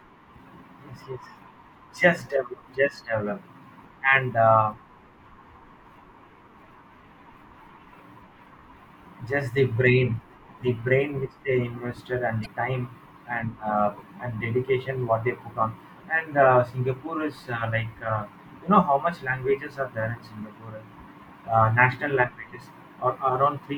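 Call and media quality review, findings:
Short blip in the speech, 12.42–12.46 s, right before "time and uh and". Damaged data in a compressed stream: corrupt bytes in a frame, decoder loses sync and hunts for the next frame header, so you get a 40 ms glitch. Check the delivery path and the file copy, not the mic chain.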